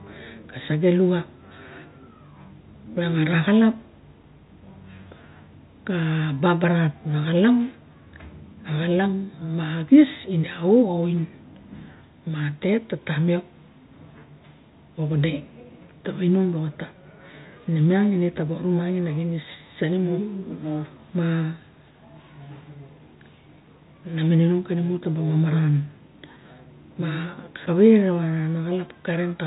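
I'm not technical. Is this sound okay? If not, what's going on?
Yes, nothing is wrong here.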